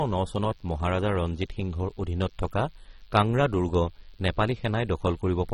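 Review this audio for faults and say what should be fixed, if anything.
DECT cordless phone buzz runs through the whole clip as a thin, steady buzz roughly 35 dB below the speech. A nearby DECT handset or base sends a radio burst every 10 ms, and the audio circuit rectifies it into a 100 Hz buzz. On a spectrogram it appears as evenly spaced horizontal lines at multiples of 100 Hz. In the waveform, the quiet gaps show a small, regular ripple. To prevent it, keep DECT phones and bases well away from microphones and preamps, and use shielded cabling.

AAC compression damage is plainly audible throughout. The speech sounds dull and smeared, with a warbling, fizzy texture on sibilants. The likely cause is AAC-LC coding at a low bitrate, consistent with about 24 kbps, which quantises away fine spectral detail. A spectrogram shows a hard ceiling with nothing above 16.5 kHz. To prevent it, capture and archive in a lossless format and encode only once, at a much higher bitrate.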